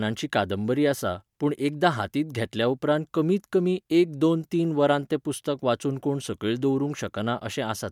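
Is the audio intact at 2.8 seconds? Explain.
Yes, the speech at 2.8 seconds is intact, with no audible fault at that moment.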